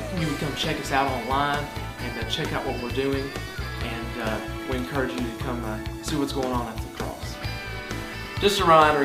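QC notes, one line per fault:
No fault detected on listening; nothing to log for this clip.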